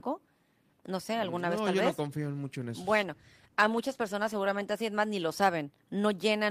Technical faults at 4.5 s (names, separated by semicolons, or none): call bitrate drop